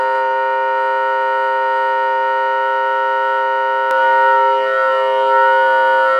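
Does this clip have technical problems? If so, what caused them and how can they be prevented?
Yes. From 3.91 s to the end of the clip there is a doubled audio track. The same signal was most likely mixed in twice, either captured again through a slower second path or left as two misaligned copies in an edit. The result is that a full-band copy, about as loud as the original, trails it by roughly a second. The copy is dry and intact, with no decay or room colour, and it begins abruptly at 3.91 s. To prevent it, route the source through a single capture path and check edits for duplicated, offset regions before export.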